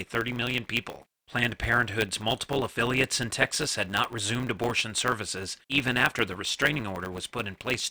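Throughout the speech, a block size mismatch drops each block's end, fitting 512-sample writes. This gives a 100 Hz buzz, shown as spectrogram harmonics, and a 1.07x speed-up at unchanged timbre.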